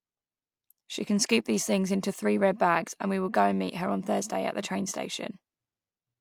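Nothing stood out on listening to the speech here.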